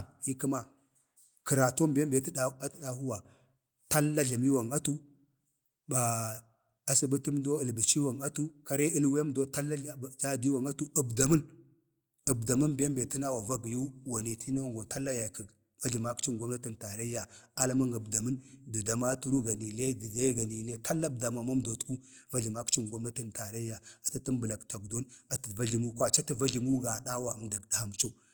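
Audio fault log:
No faults were found in this speech recording. Nothing in it calls for an entry in this log.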